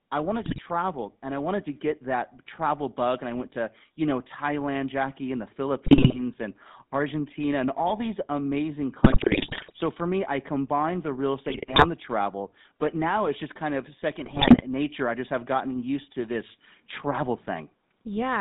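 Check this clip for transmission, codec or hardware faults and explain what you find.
Two faults are present in this speech clip: GSM full-rate codec coding throughout, and five bursts of GSM bit errors.

The GSM full-rate codec colours the whole clip. The audio is confined to roughly 150 Hz to 3.7 kHz. The codec models the vocal tract and drives it with a sparse, regularly spaced pulse excitation, so fine detail is lost. The result is a plainly audible buzzy, gravelly roughness. The coarseness fits a 13 kbps GSM full-rate stream.

GSM bit errors break through at 0.42 to 0.61 s, 5.86 to 6.22 s (after "and the"), 9.04 to 9.76 s (between "and all these amazing" and "for me I combined"), 11.48 to 11.86 s (between "I combined the real" and "the travel but now"), and 14.24 to 14.63 s. Corrupted filter, pitch and gain values reach the decoder. Frames come out with a warped spectrum or a jumping level. 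The voice turns to squawks, pops and gargling.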